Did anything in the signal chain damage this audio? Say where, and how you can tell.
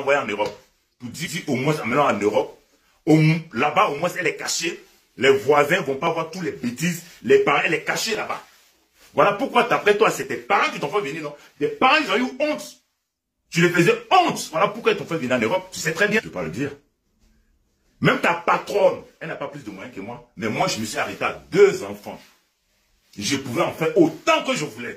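Yes: clock drift buffer slips, heard as a regular click roughly every 2.08 s from 1.91 to 24.78 s, about ten in all. This is likely a buffer-stage fault: two free-running clocks differing by around 400 ppm let the buffer drift until a few dozen samples are dropped or repeated.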